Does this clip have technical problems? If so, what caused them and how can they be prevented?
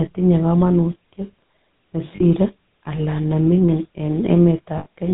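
Yes. Throughout, the speech has the buzzy, gravelly roughness of the GSM full-rate codec, with nothing above 4 kHz, which fits the 13 kbps GSM full-rate codec. It models the vocal tract and drives it with a sparse, regularly spaced pulse train, so the voice sounds grainy rather than just band-limited. A plain 4 kHz low-pass would sound muffled but smooth, and this buzz sets it apart. To prevent it, use a wideband codec such as AMR-WB or Opus where the network allows.

Lost GSM frames occur at 2.16 to 2.24 s (about 40 ms) and 4.78 to 4.86 s (about 80 ms). Here the decoder repeats the last good frame's settings, so the sound is held briefly as a rough, metallic ring. A dropout in uncompressed audio would leave a clean gap or click, and this held ring sets it apart. The second loss is longer, so its ring lasts longer. To prevent it, improve radio coverage or use stronger channel coding so fewer frames arrive corrupted.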